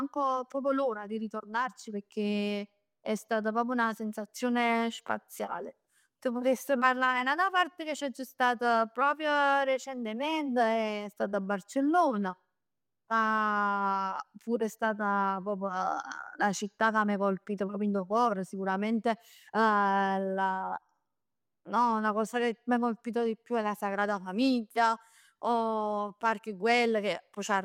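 Nothing in this speech recording stands out as a technical fault, so there's nothing here to flag.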